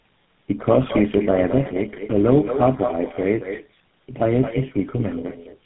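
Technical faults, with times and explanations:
Throughout, echo with no canceller: every phrase is shadowed about a fifth of a second later by a thinner copy about 9 dB quieter, picked up from the far loudspeaker and returned.
Throughout, tandem speech coding: the speech sounds rough, muffled and warbly, with nothing above 3.8 kHz, which fits about four codecs in a row, including GSM full rate, each recoding the last one's damage.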